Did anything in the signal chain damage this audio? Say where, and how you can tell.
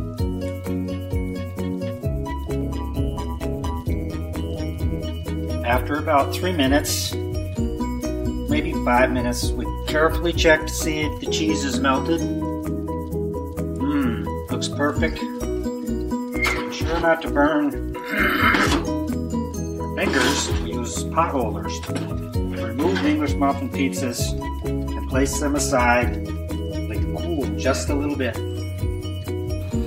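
Yes. From 2.61 to 5.01 s there's overlap-add ripple: a metallic buzz around 150 Hz, swinging about 11 dB. Some frame-based processing stage rebuilt the signal with windows whose overlap doesn't sum flat, so the gain pulses once per frame.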